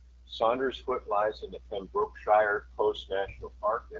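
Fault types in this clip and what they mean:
AMR wideband (HD Voice) codec: The speech sounds rough and raspy throughout, and there is nothing above about 7.6 kHz. The codec rebuilds the voice from a pulse-excited vocal tract model and fills the top band with shaped noise; this degradation points to one of its lowest rates, around 8.85 kbit/s.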